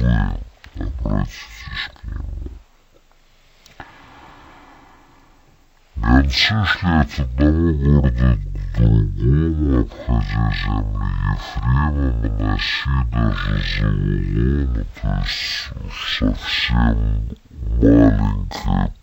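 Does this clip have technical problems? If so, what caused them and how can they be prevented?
Yes. Stereo read as mono runs throughout: interleaved left and right samples play as one channel, so everything runs at half speed and an octave low. Prevent it by matching the decoder's channel count to the file's header so stereo frames are de-interleaved correctly.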